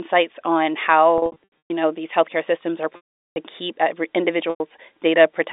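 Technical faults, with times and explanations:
1.18–1.70 s, packet loss with pitch repetition: about 320 ms of audio drops out in scattered gaps, the longest 120 ms, just before "know these healthcare systems". The receiver fills each gap by looping the last pitch period, so short gaps sound like a brief buzzy hold, and the longest fades toward silence.
2.96–3.36 s, packet loss with pitch repetition: a 400 ms loss after "these healthcare systems are". The repeated period fades out over its first 50 ms, leaving silence until the sound cross-fades back in.
4.50–4.60 s, packet loss with pitch repetition: a 100 ms loss, heard as a brief buzzy hold that fades toward silence before the speech cross-fades back in.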